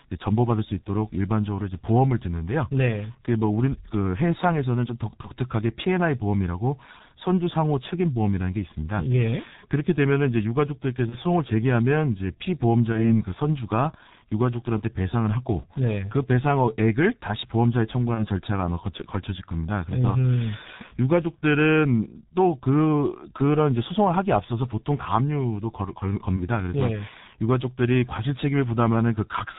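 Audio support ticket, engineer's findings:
Speech muffled and hoarse throughout, nothing above 4 kHz, consonants smeared. G.723.1 codec, heavy damage; slow-updating voice model and 30 ms frames, sound fits roughly 6 kbit/s.

Brief buzzy or noisy, fading dropouts at 5.21–5.30, 11.09–11.18, 12.92–13.23, 18.14–18.25, 26.36–26.47 s. VoIP packet loss concealed by the speech codec: each gap fits one lost 30 ms frame, extrapolated, with lingering weakness afterward.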